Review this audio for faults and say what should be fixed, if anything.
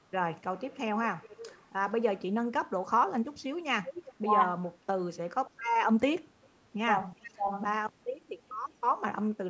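Echo leak at 0.70 to 0.79 s, 1.23 to 1.66 s, 3.83 to 4.13 s and 7.22 to 7.31 s: a faint, delayed copy of the speech trails it by about 375 to 386 ms. It is quiet, roughly 15 to 30 dB below the speech, loudest around 4 s. This is likely a far-end loudspeaker feeding its microphone, with its echo canceller not removing all of it, so the residue came back down the line. A well-adapted canceller with proper speaker-to-microphone isolation or a headset on the far end would prevent it.

Speech suppressed in double talk at 4.18 to 4.32 s and 7.36 to 7.52 s: each time, the speech briefly dips by up to about 20 dB for around 100 to 150 ms, right after an echo burst. The likely cause is the echo canceller mistaking overlapping talk for echo and ducking the near-end speech with it. Tuning the double-talk detector, so that it keeps the near-end talker when both sides speak, would prevent it.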